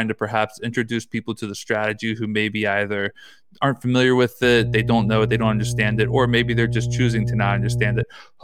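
From 4.44 s to 8.03 s, just after "either aren't familiar with", mains hum appears: a steady 60 Hz tone from ground-loop or transformer coupling, roughly as loud as the speech.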